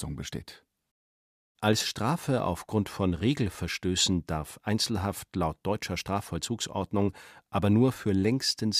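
Nothing in the speech stood out as a technical problem on listening.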